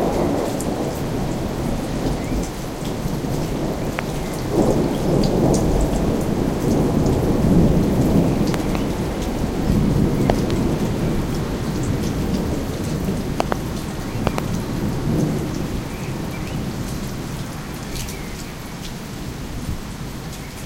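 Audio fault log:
3.99 s, 8.54–8.77 s, 10.30–10.53 s, 13.40–13.54 s and 14.27–14.40 s: loud pop. The first is a single sharp pop; the other four are pairs in quick succession. Each stands roughly 20 dB above the surrounding sound, which continues underneath without interruption. The abrupt onset and brief decay point to sudden voltage steps in the signal path, likely from a loose connector, switching transient or static discharge.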